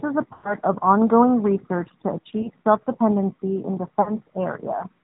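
The speech carries the AMR narrowband mobile codec throughout. Its character fits AMR-NB at around 10.2 kbps. Everything above 4 kHz is gone, leaving a boxed-in, telephone-band sound, and the coding damage is plainly audible as a buzzy, synthetic edge on voiced sounds. That edge comes from rebuilding the voice from a vocal-tract model excited by a sparse set of pulses rather than from the waveform itself.

Lost AMR speech frames appear three times. From 0.34 to 0.56 s the longest gap, consistent with about 100 ms of missing frames, makes the decoder repeat its last pitch and filter settings at falling gain, so the sound smears, drags out and fades toward silence before returning weak or rough. At 2.42 to 2.49 s a single lost frame gives a short dip or warble. At 4.02 to 4.12 s a loss of roughly 40 ms causes a brief stretched, fading blur before normal decoding resumes.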